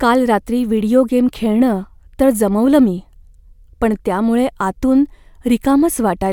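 No technical faults can be heard in the signal at any point.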